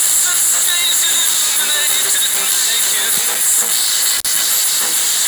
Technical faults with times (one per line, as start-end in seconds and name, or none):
4.17-4.27 intermittent contact